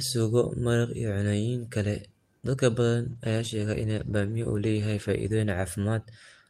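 A call bitrate drop sets in at 3.1 s and lasts to the end of the speech. The call's bandwidth estimate fell, so the Opus encoder was told to spend far fewer bits, with a sound that points to a fall from around 64 kbps to about 18 kbps. Coded more coarsely, the speech turns rough and watery, and the top end is cut away, leaving it muffled for roughly two seconds at its worst.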